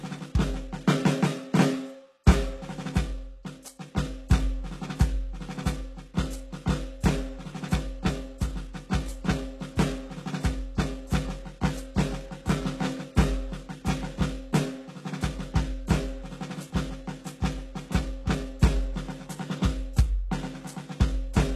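From start to finish the music carries plainly audible damage, most likely from HE-AAC compression at a very low bitrate, consistent with about 16 kbps. The upper range sounds bright yet oddly synthetic, with a gritty, metallic treble, because spectral band replication has rebuilt it from copied lower bands and its harmonics do not line up with those below. That separates it from a plain low-pass filter, which would simply dull the treble. Nothing is present above 12.3 kHz.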